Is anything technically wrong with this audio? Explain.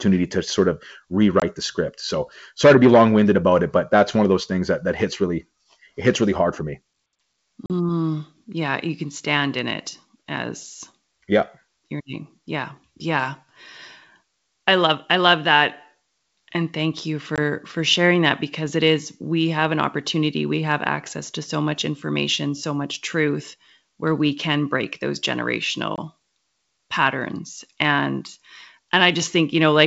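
Yes, there's packet loss on an ADPCM call here, over what sounds like G.722 wideband coding, consistent with its full 64 kbit/s mode. Dropouts hit at 1.40–1.43 s, 7.66–7.71 s, 17.36–17.38 s and 25.96–25.99 s. Each is a hard-edged silent hole of about 20 ms, except the 7.66 s one at about 40 ms, roughly two packets' worth. Silence gets slotted in, the decoder's predictor and step size drift from the sender's, and the speech comes back with a brief level or distortion wobble before settling.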